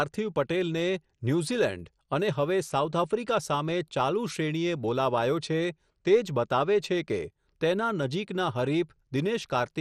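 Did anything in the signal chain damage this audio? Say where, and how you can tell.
Yes, at the codec stage, where MP2 compression at a low bitrate, likely around 64 kbps, has starved the sub-bands of bits. Throughout the speech nothing reaches above 14.1 kHz, upper bands flicker in and out, and coarse quantisation leaves a dull, gurgling, granular texture.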